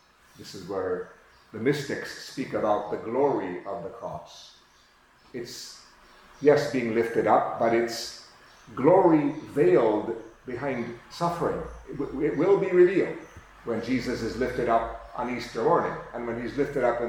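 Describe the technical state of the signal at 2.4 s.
The signal at 2.4 s is intact, with no audible fault at that point.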